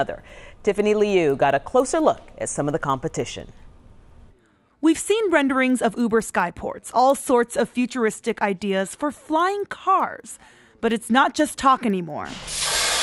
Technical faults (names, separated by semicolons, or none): resampler restarted on every block